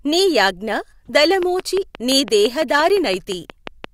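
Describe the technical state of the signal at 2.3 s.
At 2.3 s the speech sits inside a train of clicks, likely from interference or a faulty connection injecting pulses into the path. From 1.43 to 3.85 s, about fifteen near-identical clicks tick regularly at 5.8 per second, peaking roughly 10 dB above the speech.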